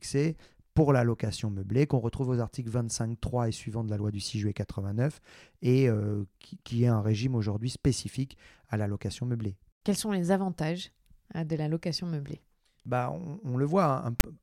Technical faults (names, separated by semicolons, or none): file tags played as audio